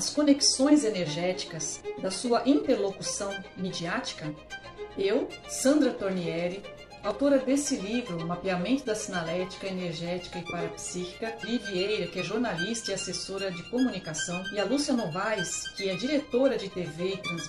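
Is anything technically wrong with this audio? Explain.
Yes. Damaged data in a compressed stream causes two brief blips, from 7.11 to 7.13 s and at 11.43 s. Corrupted bytes make the decoder misread frames and resynchronise on the next header.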